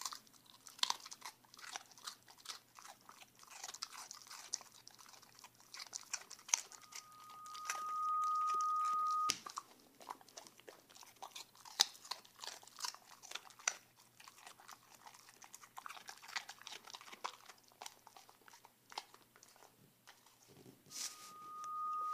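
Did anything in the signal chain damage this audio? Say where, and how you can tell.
Yes, loudspeaker feedback squeal: the microphone-to-speaker loop exceeded unity gain, so a 1.2 kHz tone swells up at 6.70–9.35 s and 20.89–22.13 s.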